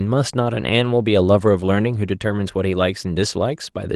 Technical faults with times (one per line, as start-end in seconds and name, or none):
none